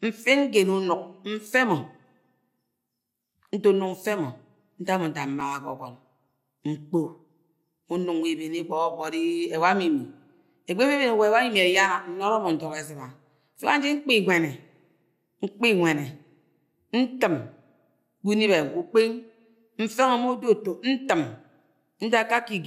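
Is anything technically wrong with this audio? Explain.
Yes, there is one fault. At 5.41 s, just after "nda mo nda", a repeated buffer occurs: a 2.67 ms chunk, consistent with a 128-sample buffer, plays three times. This produces a brief buzzy click, seen as identical waveform segments with abrupt joins and a thin vertical streak on a spectrogram.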